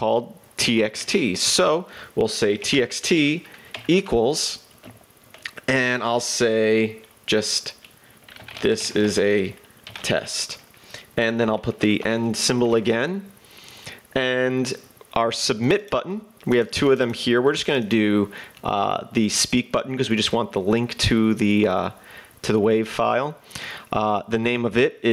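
Gain pumping runs throughout: the input gain was likely set far too high, so a fast limiter clamps down on every loud sound. The gain swings by about 15 dB, leaving the sound squashed.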